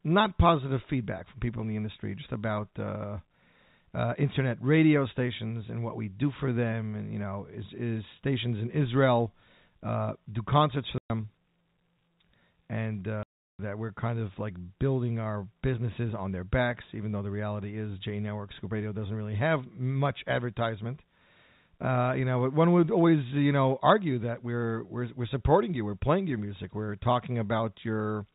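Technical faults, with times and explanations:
10.98 to 11.10 s and 13.23 to 13.59 s, packet loss filled with silence: the speech drops into dead silence for 120 ms and then 360 ms, with hard edges. Lost packets were replaced with silence, and both gap lengths fit whole runs of 30 ms packets.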